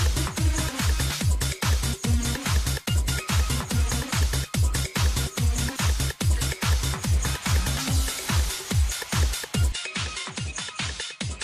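Input switched to a poorer device at 9.72 s: with no gap, the sound loses everything above 10.5 kHz, drops about 5 dB and gains faint new noise, likely from a changed microphone.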